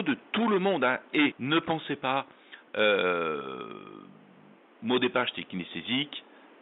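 No technical faults are audible.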